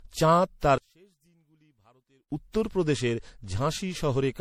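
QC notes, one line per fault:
Throughout: generation loss. The speech has that swirly, smeared, hollow quality, worse than a single pass at 64 kbit/s MP3 should give, with consonant attacks going soft. Most likely it was re-encoded around five times, each pass adding fresh quantisation noise and spectral holes.
0.78–2.31 s: one channel inverted. Right after "চাঁদ তার", the voice drops by about 37 dB in mono and nearly disappears until "উত্তর প্রদেশের". One side has most likely had its polarity flipped, so the centred voice cancels and only a faint difference signal is left.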